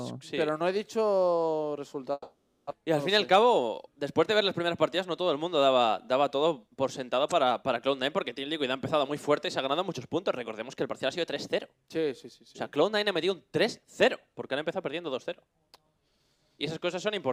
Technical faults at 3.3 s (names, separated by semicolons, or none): jitter buffer speed-up